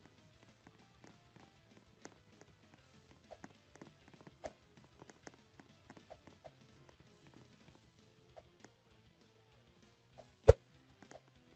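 Nothing is technically wrong with this audio, which comes through an ordinary call connection.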